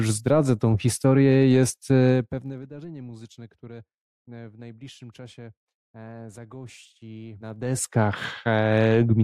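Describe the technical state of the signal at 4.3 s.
At 4.3 s the speech signal is intact, with no technical fault present at that moment.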